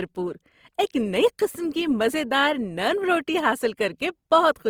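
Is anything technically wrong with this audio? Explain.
Yes. There is likely Opus compression throughout the speech. Starved bands get folded or noise fill, so the speech sounds grainy and rough. This fits about 24 kbps.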